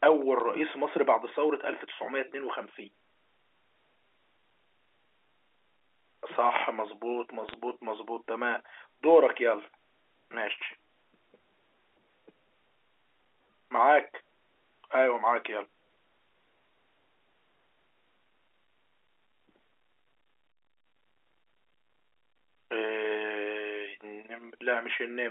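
At 0.40 s, then 7.49 to 7.54 s, bit errors on the digital phone line flip bits in individual A-law samples, so single samples jump to wrong values. The first is a single brief burst of errors; the second, at a higher error rate, is a brief crackle over the band-limited telephone speech.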